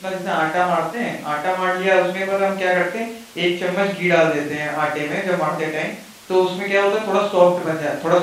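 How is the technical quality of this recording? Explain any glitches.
I didn't hear any glitches here; the recording just runs along with nothing jumping out as a technical problem.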